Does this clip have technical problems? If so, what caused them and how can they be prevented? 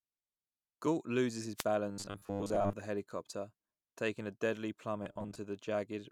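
Yes. Just after "loses his", from 1.56 to 1.64 s, a wireless microphone noise hit sounds like a short swish of static. The analogue FM radio link faded as reflected signals cancelled, and receiver noise briefly rose over the speech. Unlike a digital dropout, which leaves silence or a hard gap, this fills the moment with hiss-like noise. Diversity receivers, good antenna placement and line of sight to the transmitter prevent it.

Shortly afterwards, from 1.89 to 2.73 s, ending before "the helicopter taking a", and again from 5.03 to 5.38 s, after "helicopter taking a deadly", there is robotic sound from repeated short buffers. The speech turns into a rigid, metallic buzz at 100 Hz. This is likely because audio arrived too seldom and a segment of about 10 ms was looped. In the first stretch most of the audio is replaced, and in the second about half. A steady pitch set by the buffer length, with no gaps, separates this from codec warble or choppy dropouts. 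Larger buffers or a less loaded processing path prevent it.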